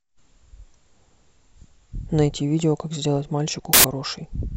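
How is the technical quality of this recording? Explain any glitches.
There's one real glitch, and it's hard to miss. From 3.73 to 3.84 s, roughly a tenth of a second, the speech gets swallowed by a burst of loud, harsh noise. That's samples built from the wrong bytes: the reader assembled each sample with its bytes misaligned or in the wrong order, so the jittery low bits ended up as the big part of every value. You get a loud, harsh broadband noise.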